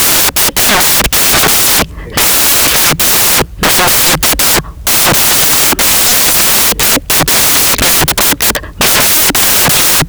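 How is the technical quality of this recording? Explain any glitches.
The technical quality is poor, because one fault runs through the entire speech recording. From start to finish the samples are built from the wrong bytes. The reader misassembles each sample, so the rapidly changing low bits become its largest part. The result is loud, harsh broadband noise, close to white on the loud sounds. A spectrogram shows flat energy filling every frequency, and the waveform appears as a dense block.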